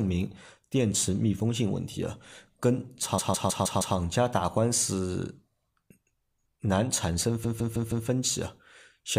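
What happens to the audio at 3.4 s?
From 3.18 to 3.96 s the speech stutters from repeated frames: one 157 ms block of compressed audio is decoded again five more times, adding about 0.78 s. Unlike a dropout, nothing goes missing; the identical fragment simply recurs in rhythm.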